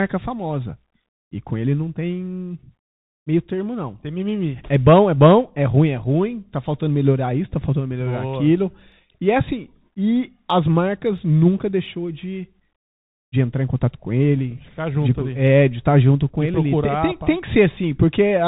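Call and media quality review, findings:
Bluetooth CVSD headset codec, entire clip: speech band-limited, nothing above 3.8 kHz, scratchy s sounds, granular hiss underneath. Spectrogram shows a hard ceiling near 3.8 kHz, consistent with 64 kbps CVSD.

Clock slip clicks, 0.12–18.41 s: faint steady ticks, about ten per second, roughly 150 total. Likely unsynchronised device clocks slipping single samples. Waveform shows one-sample steps; spectrogram shows thin evenly spaced vertical lines.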